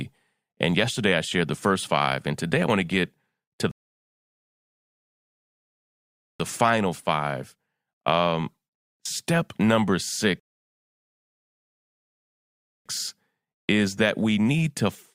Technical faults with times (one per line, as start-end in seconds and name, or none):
3.71-6.40 rebuffering stall
10.40-12.86 rebuffering stall